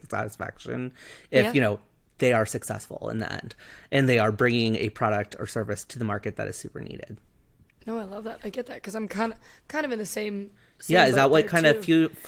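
Nothing technically wrong turns up in this speech recording, and its Opus voice compression sounds just the way you'd expect it to.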